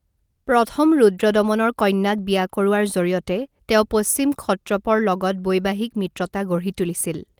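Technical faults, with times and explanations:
No technical faults can be heard anywhere in this recording.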